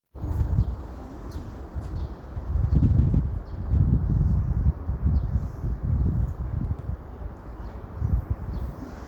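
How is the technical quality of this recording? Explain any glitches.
One fault stands out: a call bitrate drop from 0.33 s to 3.91 s. The call's bandwidth estimate fell, so the encoder went from 40 kbps down to 17 kbps and stayed near that floor for about 3.5 s. With fewer bits, the sound turns coarse and watery and loses its top end. Unlike packet loss, nothing drops out. The audio stays continuous but degraded until the bitrate climbs back.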